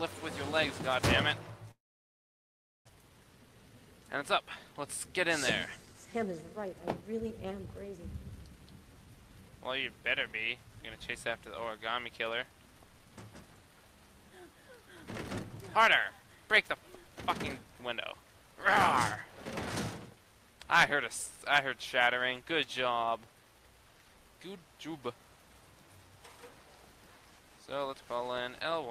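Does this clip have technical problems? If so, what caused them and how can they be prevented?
Yes. At 1.71 s the sound breaks off into a short buzzy continuation of the last sound that fades quickly to silence. That quiet gap lasts to 2.91 s. When audio returns, about a second of material is simply gone, and the timing shifts by something like 150 ms. This is most likely a long network dropout: the stream stopped arriving, the receiver concealed briefly, then had nothing to play. Using a more stable network path, with redundancy or forward error correction, would prevent it.

From 5.86 to 7.83 s the sound runs at about 105% of normal speed while keeping its pitch, which gives it a slightly hurried feel. This is a jitter buffer speed-up. The buffer had filled beyond its target, so the receiver trimmed pitch-period-sized pieces repeatedly, removing around a tenth of a second in total to bring the delay back down. 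Reducing packet delay variation, or letting the buffer drain more gradually, would prevent it.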